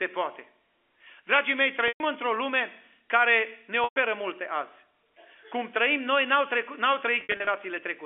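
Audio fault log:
1.88 to 2.00 s and 3.84 to 3.96 s: packet loss with pitch repetition, 120 ms gaps filled by a repeated pitch period that buzzes, then fades, unlike a silent dropout.
7.21 to 7.47 s: packet loss with pitch repetition, 160 ms lost in scattered runs of at most 60 ms, heard as brief stuttering buzzy holds rather than one fade.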